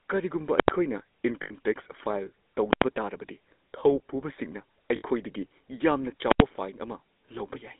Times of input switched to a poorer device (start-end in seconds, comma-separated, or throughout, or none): none